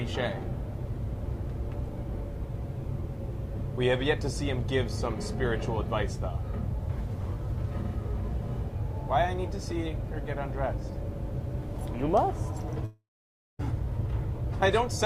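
At 12.85 s the stream most likely suffers a long network dropout: the receiver stops getting audio for about three quarters of a second and has nothing real to play. It stretches the last sound it had into a fading buzz, and for roughly 0.55 s of the gap only silence remains. The audio resumes at 13.61 s, with about 0.74 s of the original material simply gone rather than delayed.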